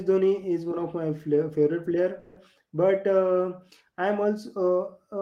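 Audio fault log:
2.19 to 2.38 s, call audio freeze: The sound stalls and the last moment is drawn out as a fading tone for about 170 ms. Nothing is lost. The audio resumes where it stopped, now running 170 ms later. Delayed packets likely emptied the jitter buffer.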